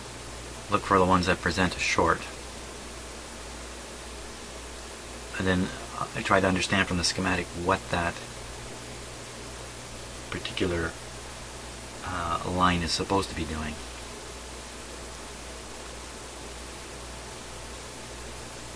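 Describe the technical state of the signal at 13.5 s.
At 13.5 s the signal is intact, with no dropout, distortion, glitch or other technical fault to be heard at that point.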